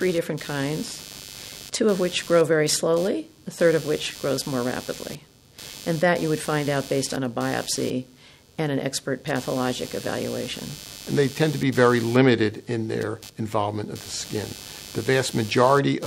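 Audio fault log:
throughout computer activity noise: buzz pulsing about 100 times a second, roughly 20 dB under the sound, from computer load shifting shared ground; regular vertical spectrogram streaks.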